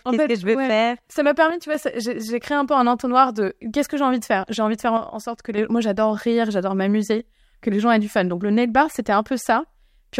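Speech with two abrupt level drops of about 6 dB, from 1.50 to 1.75 s and from 4.97 to 5.58 s (after "envie de faire", before "moi j'adore rire j'adore"), likely one channel dropping out; waveform and spectrogram show sudden, uniform dimming across all frequencies.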